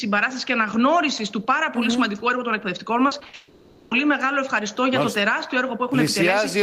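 From 3.07 to 3.35 s the sound turns choppy and robotic. This is repeated packet loss. Four gaps fall in under 0.3 s, the longest 60 ms. Each gap is covered by stretching the last sound, so about half the span is patched rather than real.

From 3.35 to 3.93 s, a continuous buzzy, smeared tone replaces the audio for 560 ms, with no silence. The cause is likely a long network dropout. The receiver keeps extending the last sound, and that whole stretch of the original is lost.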